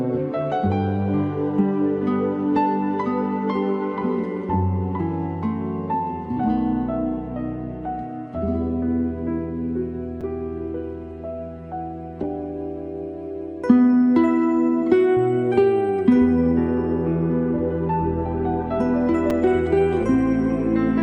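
At 10.21 s and again at 19.30 s there is a repeated buffer: fresh audio failed to reach the output in time, so the last block was played a second time. Each repeat lasts about 5.3 ms, which fits a 256-sample buffer. Because the block is so short, it is heard as a brief click or buzz rather than a stutter. Unlike a dropout, there is no silent gap, only the same fragment joined hard to itself.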